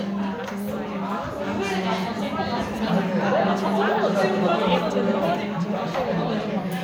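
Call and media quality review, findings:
No audible faults found in this recording.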